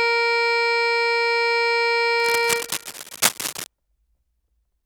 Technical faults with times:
2.20-3.66 cable scratch noise

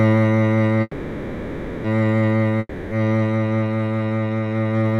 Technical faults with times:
0.81-1.86 call audio freeze
2.59-2.93 long network dropout

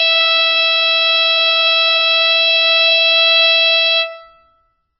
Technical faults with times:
0.00-5.00 MP3 compression

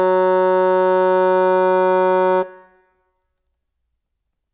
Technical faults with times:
none

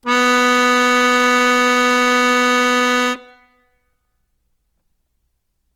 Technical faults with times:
0.00-5.76 Opus compression

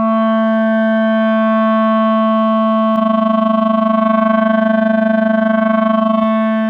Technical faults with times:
2.96-6.26 overlap-add ripple

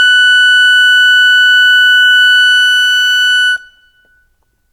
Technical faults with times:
none

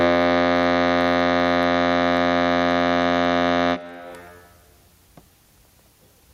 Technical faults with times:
0.00-6.33 gain pumping

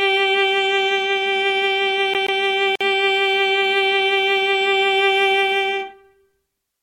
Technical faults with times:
2.14-2.40 CD stuck on one turn
2.76-2.81 gap at a join of encoded pieces

